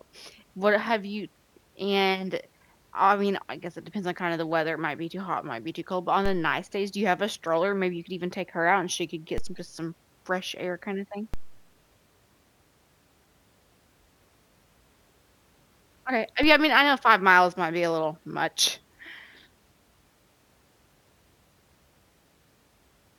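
Speech with four DC steps, at 6.26, 9.38, 11.34 and 16.43 s, each a sudden zero-line shift of about -20 dBFS heard as a low thump beneath unchanged speech, then decaying through a 2 Hz high-pass, consistent with converter recalibration or an offset input being switched in.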